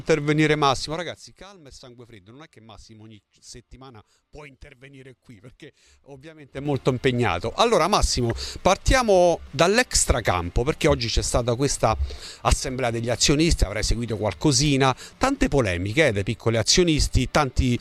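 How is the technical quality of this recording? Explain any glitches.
The recording has zipper noise in two places. From 0.77 to 1.37 s the level falls by roughly 25 dB in 3 dB steps. From 6.40 to 6.74 s it rises by roughly 25 dB in 6 dB steps. In both places the gain jumps about ten times a second with no smoothing. Each jump leaves a small click, so a ticking zipper rides on the sound while the level moves.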